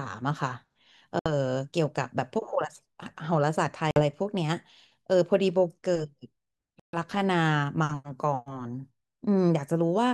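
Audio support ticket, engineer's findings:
Speech drops to dead silence three times: 1.19–1.32 s (about 66 ms silent), 3.91–4.00 s (52 ms), 6.80–6.97 s (137 ms, the longest). Clean cuts, then audio resumes. Likely a Bluetooth stall: interference held back packets, the headphone buffer ran empty and playback paused until the resent data arrived. Worth checking the RF environment and the link's retransmit behaviour.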